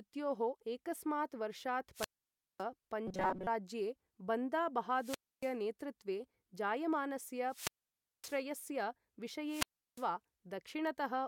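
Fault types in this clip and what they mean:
Wireless microphone squelch dropout: A fading radio link makes the receiver mute the output. Just after "एकस्मात् वर्षात्" and three more times, a burst of hiss gives way to a blank gap of about 0.28 to 0.56 s. This appears as near-empty columns in the spectrogram and flat-line stretches in the waveform.
Robotic sound from repeated short buffers: From 3.07 to 3.47 s, just before "राज्ये बन्दा", most of the audio becomes a metallic 188 Hz buzz. The likely cause is a repeated fragment of about 5.3 ms. The spectrogram shows rigid, evenly spaced horizontal harmonic lines, and the waveform shows a repeating pattern.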